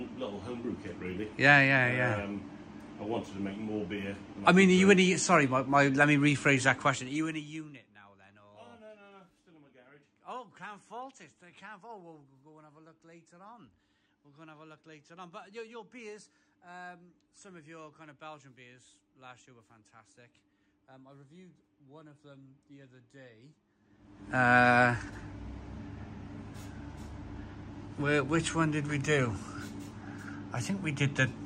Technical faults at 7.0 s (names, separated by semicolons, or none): zipper noise